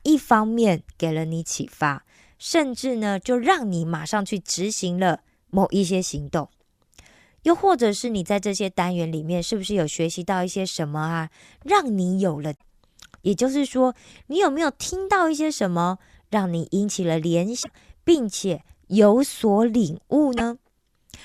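At 12.53 s the speech breaks into a short glitch lasting about 0.09 s. It is damaged data in a compressed stream. Some bytes in the encoded speech are wrong, so the decoder misreads the frames there. It loses sync and hunts for the next valid frame header. A glitch returns at 17.60 s for about 0.1 s, and again at 20.34 s for about 0.07 s.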